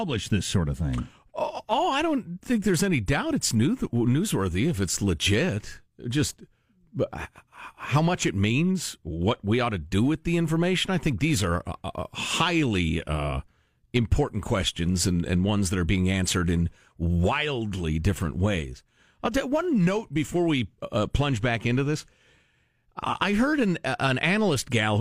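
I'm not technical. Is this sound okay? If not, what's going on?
Yes, the recording is in good technical shape, with no dropouts, glitches, distortion or other defects anywhere in the speech.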